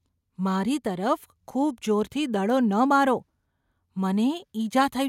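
No technical faults can be heard anywhere in the speech. Nothing in the audio stands out as broken or damaged.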